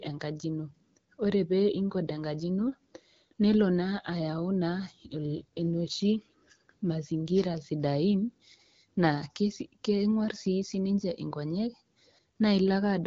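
Nothing here counts as a fault: the speech comes through the AMR wideband (HD Voice) codec at 12.65 kbit/s, a rate where that codec keeps speech clear and leaves only a light touch of coding on it.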